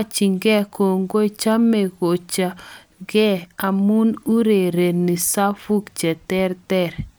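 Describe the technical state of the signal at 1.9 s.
At 1.9 s the signal is intact, with no dropout, clipping, glitch or other technical fault audible at that point.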